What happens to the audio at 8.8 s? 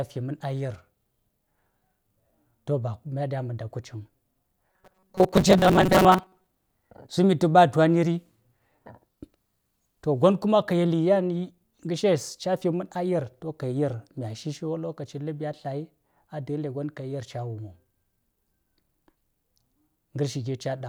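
Nothing goes wrong at 8.8 s; the speech carries on there without any dropout, glitch or distortion.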